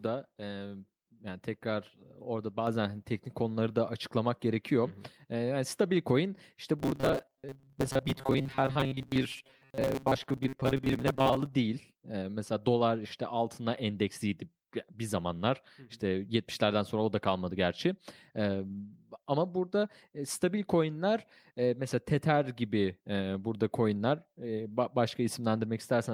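At 2.67 s the microphone volume steps up by about 5 dB in one jump, lifting voice and background together, unlike a gradual fade or a speaker moving closer. From 6.79 to 11.54 s there is a robotic sound, a rigid metallic buzz fixed at 134 Hz, likely from repeated short buffers of about 7.5 ms, with roughly half the audio replaced.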